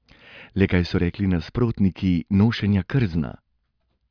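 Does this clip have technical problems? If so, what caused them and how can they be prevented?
No, there are no technical problems in this recording.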